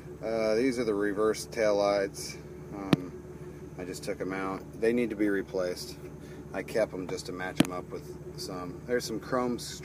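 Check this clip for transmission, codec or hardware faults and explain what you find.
No transmission, codec or hardware faults can be heard anywhere in the clip. Nothing in the audio calls for a timestamp or an explanation.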